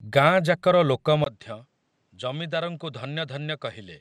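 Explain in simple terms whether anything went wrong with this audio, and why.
Two things went wrong. Throughout the speech there is a dull, gurgling, grainy quality, most likely MP2 compression squeezed too hard: the encoder saves space by switching off the upper frequency bands and storing the rest coarsely, which smears the sound.

At 1.24 s the sound drops out for a split second, then continues noticeably quieter and duller, with nothing above about 9.3 kHz and faint new background noise. This points to the input switched to a poorer device, likely a different, lower-quality microphone taking over.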